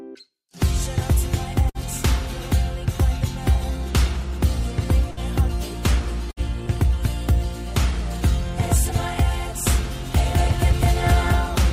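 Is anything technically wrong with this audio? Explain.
Yes, there are two faults. Bursts of packet loss at 1.69–1.78 s, 5.11–5.20 s and 6.31–6.40 s drop consecutive packets. The receiver stretches and fades the last sound before resuming later, with a short stretch missing. A doubled audio track runs from 10.15 s to the end, likely from a second, slower capture path. An abrupt copy of similar loudness trails by roughly a fifth of a second, with no room colour.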